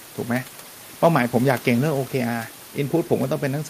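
Nothing technical goes wrong in this short speech recording, and the faint room noise sitting about 22 dB below the speech is just part of the space it was recorded in.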